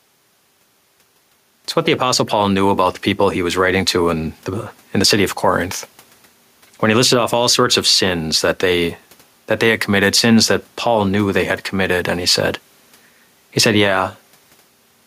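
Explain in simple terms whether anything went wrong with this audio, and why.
Gain pumping runs through the whole speech clip. Loud and soft parts end up closer in level, and the sound is squashed; the quiet room noise is just part of the recording. The likely cause is a level set too high, with a fast limiter pulling it back down.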